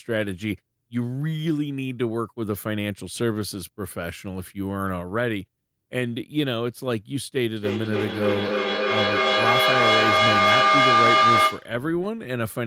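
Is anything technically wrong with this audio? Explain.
Yes, there is one fault. Feedback howl runs from 7.56 to 11.77 s. A microphone is picking up a nearby loudspeaker carrying the same call, and each trip around that loop returns louder than it left, so the sound grows instead of dying away. It narrows to a tone near 1 kHz that pulses roughly every third of a second, the loop's delay, and peaks about 7 dB above the speech.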